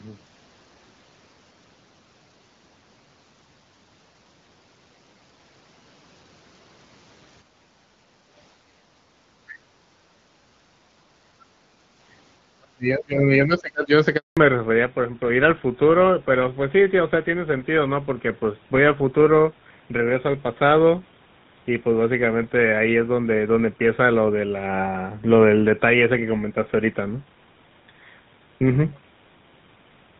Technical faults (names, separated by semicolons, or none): background gated by the echo canceller; other side's voice leaking through; speech suppressed in double talk; handover gap; fallback to narrowband